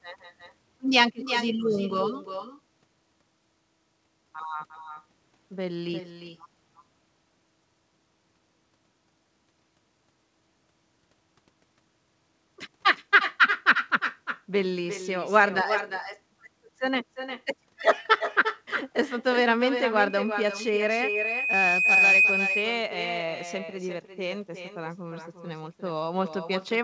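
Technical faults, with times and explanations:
Throughout: echo with no canceller. Every phrase is trailed by a second copy roughly 0.4 s later, about 7 dB below the direct speech, and thinner. The far end is playing the call through a loudspeaker, and its microphone picks that playback up again. Nothing on that side subtracts it, so the talker's own audio makes the network round trip and lands back on top of itself.
20.07 to 22.45 s: loudspeaker feedback squeal. A single tone at 2.5 kHz rises over roughly two seconds until it sits around 5 dB above the speech, then stops at 22.45 s. Here a microphone is hearing the loudspeaker it drives, and at 2.5 kHz the gain around that loop went above one. Each trip through the loop makes that frequency louder, so it builds on its own into a howl until the amplifier limits it or the loop is broken. The tone is well within the call's band, which ends at 8 kHz as a 64 kbps G.722 wideband path does.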